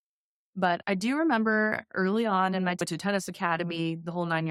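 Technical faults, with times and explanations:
2.80 s, stream segment skipped: just after "early on in my" the speech jumps forward with a brief blip, likely an unloaded stream segment the player passed over.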